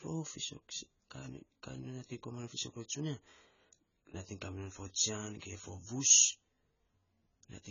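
Heavy AAC compression runs through the whole clip, likely AAC-LC at a bitrate that fits about 16 kbps. Nothing remains above 7 kHz, so the speech sounds dull, and coarse quantisation with too few bits leaves sibilants and sustained vowels warbling and fizzy.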